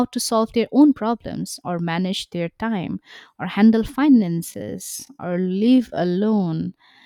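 From 4.06 s to the end of the clip, right after "their time or handle", the speech slows to about 0.65 times its pace while pitch holds steady, a time-stretched section, likely from software repeating short segments to lengthen the audio. It sounds dragging.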